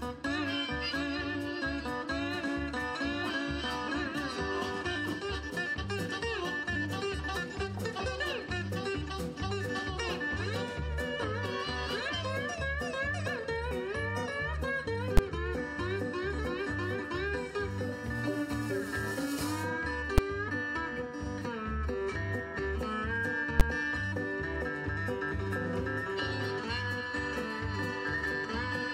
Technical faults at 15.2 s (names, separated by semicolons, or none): invalid numbers at full scale